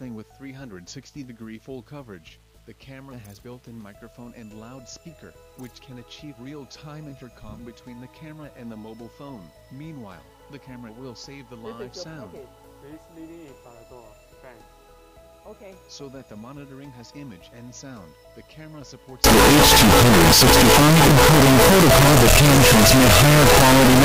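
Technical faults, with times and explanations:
19.24–24.04 s, signed and unsigned mixed up: the final stretch of the clip becomes a harsh, very loud distortion in which quiet moments are as loud as the loudest. The likely cause is the 8-bit samples being read with the wrong sign convention, so the top bit flips and every pass through zero becomes a jump across the whole range.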